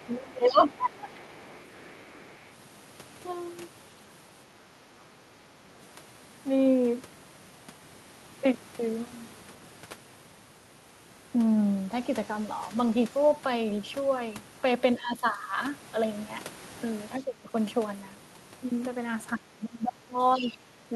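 Right from the start, a faint second voice sits under the talker, about 30 dB down from 0.00 to 0.06 s. That is the other side's voice leaking through. From 0.06 to 1.09 s the talker's own speech sags by as much as about 20 dB, which is speech suppressed in double talk. Inside that stretch the leaked voice rises to about 15 dB below the speech between 0.46 and 0.64 s. It then lingers, roughly 25 dB down, from 0.97 to 2.42 s. The leak is likely loudspeaker playback of the far end reaching the microphone, with the echo canceller failing to subtract all of it.

Later, the talker's level dips again while the far side is active. The drop is slight, about 5 dB, at 14.98 to 15.52 s. It is about 20 dB at 17.20 to 17.54 s and deepest, about 25 dB, from 19.36 to 20.93 s. In that last stretch the other side's voice also breaks through at about 25 dB below the speech, from 20.34 to 20.57 s. These dips are likely the echo canceller's suppressor, unable to tell near speech from echo, turning everything down together.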